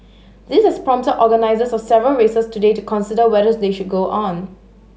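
Mains hum runs under the speech for the whole clip: a steady 50 Hz tone with some low harmonics, sitting roughly 30 dB below the signal. It points to a ground loop or nearby transformer coupling the power line into the recording path.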